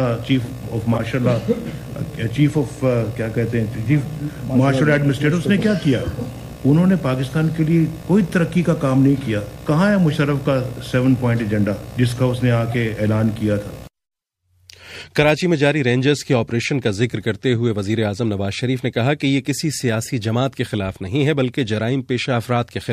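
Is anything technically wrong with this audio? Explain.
Yes. Three short chirps and bursts of noise cut through the sound at 0.94 to 1.00 s, 12.69 to 12.74 s and 16.61 to 16.64 s. The first is the loudest, peaking near about −10 dBFS, and the others sit around −15 to −20 dBFS. This is a corrupt frame decoded: a handful of compressed frames carried flipped bits, and the decoder played them anyway, so garbled gains and codes threw energy onto the wrong frequencies for the length of each damaged stretch.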